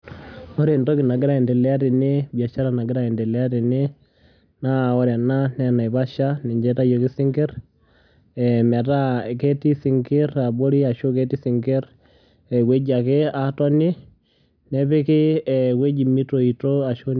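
Speech recording, no technical faults detected.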